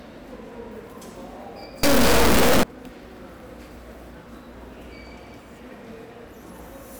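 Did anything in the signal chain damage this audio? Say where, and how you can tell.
Yes, at the sample-format conversion stage: from 1.83 to 2.63 s the audio turns into a brutally loud, buzzing square wave, dropping to silence in the quietest moments. That's integer read as float: 32-bit integer samples interpreted as 32-bit float, so values land at near-zero or far beyond full scale.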